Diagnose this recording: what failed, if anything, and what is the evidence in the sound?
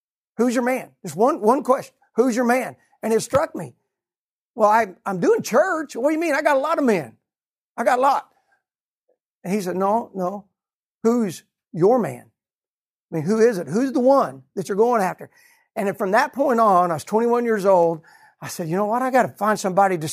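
A clock-matching stage at the driver and buffer level likely made drift correction steps, jumping the playback rate in one move to rebalance its buffer. The speech runs 6.27% fast and about 105 cents sharp from 3.22 to 4.64 s, just before "I I'm doing church", and again from 15.03 to 16.46 s, between "one that you're going" and "on I was". From 8.09 to 8.83 s, after "I got a", it runs 6.27% slow and about 112 cents flat. Each time it snaps back to normal pitch.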